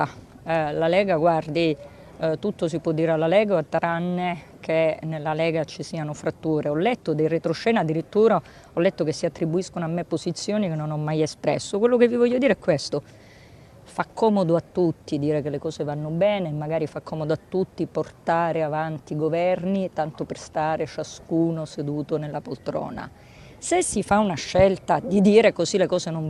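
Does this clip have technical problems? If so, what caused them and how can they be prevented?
No, nothing stood out as a technical problem on listening, so there is nothing here that needs a cause traced or a fix put in place.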